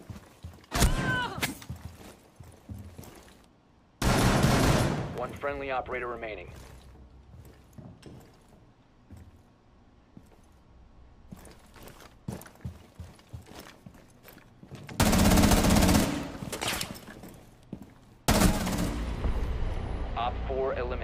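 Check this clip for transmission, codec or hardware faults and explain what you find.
There is one hardware fault: periodic USB or driver dropouts from 2.11 s to 5.38 s. Every 99 ms, about ten times per second, something stalls the USB bus or audio driver and around a millisecond of audio is skipped outright, roughly thirty times in all. Each skip splices the waveform together with a discontinuity, heard as a rapid, evenly spaced ticking that rides on the sound and is audible only while signal is present.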